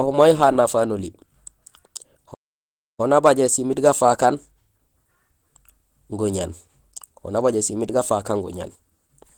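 From the first moment the speech carries plainly audible Opus compression damage, likely from encoding at a low rate that fits roughly 16 kbps in the codec's hybrid speech mode. The voice sounds muffled and hoarse, and the tone turns grainy and rough. The bandwidth stays full, reaching about 20.2 kHz. On a spectrogram, the upper bands show smeared, noise-like texture instead of clean harmonic detail, with energy present up to that ceiling.

At 2.33 s a playback stall cuts the sound off in mid-flow. The output goes fully silent for about 0.65 s, and the audio resumes at 3.0 s with "nabajé simiit gafaak". The player probably ran out of buffered data or had its thread blocked. On the waveform this shows as an abrupt drop to silence. The spectrogram shows a clean vertical band of empty space across every frequency.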